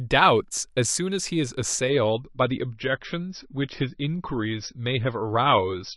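At 1.9 s the speech drops abruptly in quality and stays that way to the end. This is an adaptive stream switching to a lower bitrate. The player swapped to a cheaper version of the same audio, which fits a fall from about 128 kbit/s MP3 to roughly 27 kbit/s. There is no gap at the switch. Above it, the treble is gone, with nothing above 5.9 kHz, and the speech sounds duller and more smeared.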